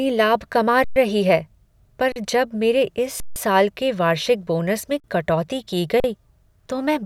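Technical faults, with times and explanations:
0.84–0.96 s, 2.12–2.16 s, 3.20–3.36 s, 5.00–5.04 s and 6.00–6.04 s: underrun with held sample. The speech freezes for 120, 40, 160, 40 and 40 ms. The first follows "लाभ कमा", the second "है पर", the fourth "के वार्षिक बोनस में". The output buffer ran dry, and the converter held its last value. The waveform sits flat, so sound simply stops without a sharp click. No speech is skipped. Playback resumes where it paused, so each gap ends softly.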